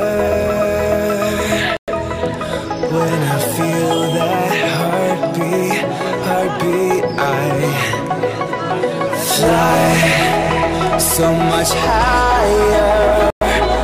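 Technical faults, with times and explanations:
1.77–1.88 s and 13.30–13.41 s, Bluetooth stall: the sound cuts abruptly to silence for about 110 ms each time, then carries on. The likely cause is interference delaying wireless packets, so the headphones' buffer ran empty and playback paused until the resent data arrived.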